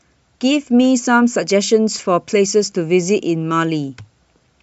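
At 1.98 to 2.00 s the speech has a brief spot of lost LE Audio frames. About 15 ms of signal never arrived, which fits two 7.5 ms frames of the light, likely LC3-coded stream. The decoder patched the hole by replaying the last spectrum with scrambled phase, so the sound turns into a short, grainy, noisy smear rather than silence. That smear, with no clean gap or click, is what separates concealment from a plain dropout.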